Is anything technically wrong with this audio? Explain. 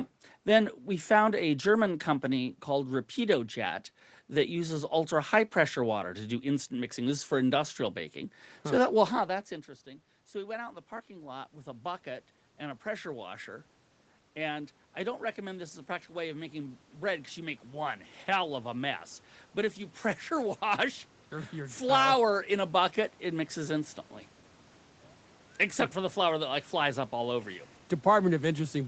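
Yes. From 9.28 s to 23.97 s, voice and room background swell together as the level creeps back up by about 13 dB. This is automatic gain rising: after the talker moved away around 9 s, the input fell about 17 dB, and the gain control slowly raised its gain to compensate.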